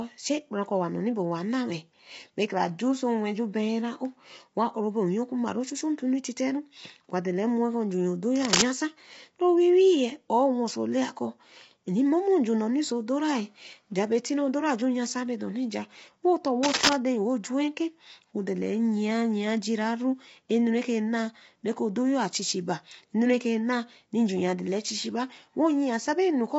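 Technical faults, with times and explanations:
Throughout, low-delay AAC compression: the speech has a rough, grainy texture, with noise filling the gaps between harmonics and nothing at all above about 7.7 kHz. That points to AAC-ELD at a low bitrate, something like 24 kbps. The likely cause is that the codec's very short frames can't separate the pitch harmonics cleanly, so with so few bits to spend the top band gets dropped and the detail smears into grit.
8.35–8.62 s and 16.63–16.94 s, cable scratch noise: two brief bursts of dense, uneven scratching sit over the speech, each about a quarter to a third of a second long. The first is roughly 5 dB above the signal and the second is at about the same level as the speech. Sharp, ragged rustle like this is likely a worn cable or connector being moved, with its contact resistance jumping around rapidly while it shifts.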